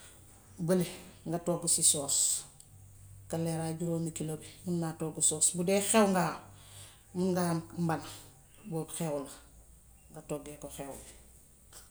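No technical faults occur at any point in the recording, so there is nothing to describe in time order.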